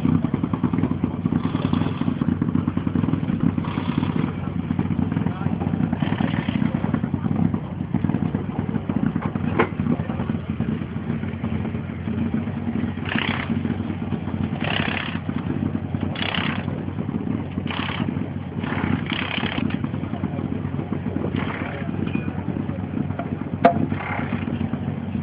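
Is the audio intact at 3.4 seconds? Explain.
No. At 3.4 seconds the audio has frames out of order, from 3.33 to 3.47 s. Two adjacent blocks of about 70 ms each were decoded in swapped order, which fits three frames per block. That short stretch plays with its halves exchanged. It comes across as a brief garbled flutter. Nothing is missing. The same sound is simply played back in the wrong sequence.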